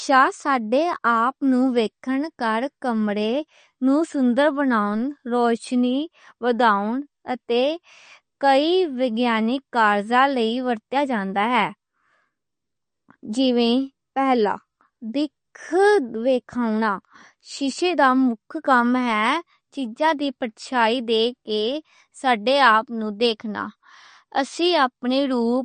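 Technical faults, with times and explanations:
Throughout, MP3 compression: the speech is plainly watery and swirly with nothing above 9 kHz, likely from MP3 encoding at a low bitrate, one that fits about 40 kbps. Unlike a plain low-pass filter, faint frequency components flicker in and out between frames, smearing sibilants and onsets.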